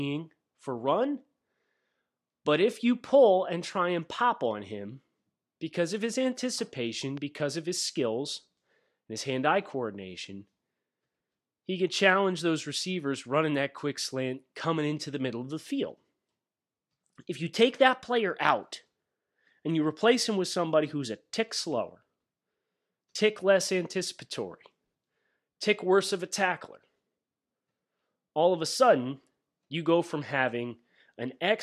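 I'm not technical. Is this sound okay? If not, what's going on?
No. At about 7.17 to 7.20 s, between "because of his anticipation" and "because of his skills", there's a single loud pop, likely from a plug, switch or static spark. Unlike a dropout, the speech carries on unbroken beneath it.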